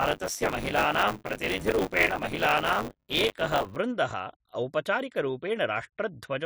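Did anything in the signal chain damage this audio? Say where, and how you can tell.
Yes, buffer tearing at the driver or buffer stage, from 0.0 to 3.76 s. A 100 Hz robotic buzz rides the speech and then stops. Writer and reader have slipped, so roughly a third of each 10 ms period replays audio about 20 ms old, with hard joins. These show as vertical spectrogram striations every 10 ms and as waveform steps.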